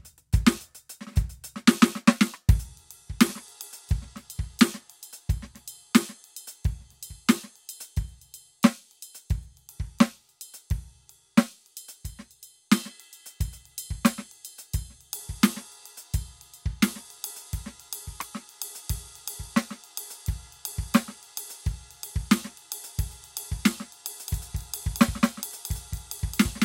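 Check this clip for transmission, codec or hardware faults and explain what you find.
One fault turns up, close to the end of the music. From 24.28 s to the end there is a doubled audio track. A slower second capture path or an out-of-step edit likely mixes the music in twice. A dry, full-band copy about 200 ms late and about 5 dB quieter cuts in abruptly and echoes each attack.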